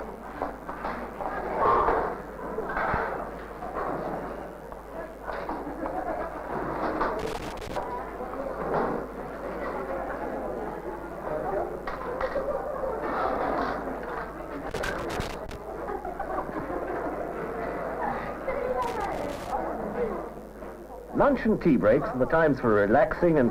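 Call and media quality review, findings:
Loose connector crackle, irregular scratchy bursts at 7.19–7.83 s, 14.69–15.56 s and 18.82–19.53 s. Worn or dirty contact in a cable or jack making and breaking as it moves, chopping the signal; DC on the line adds pops.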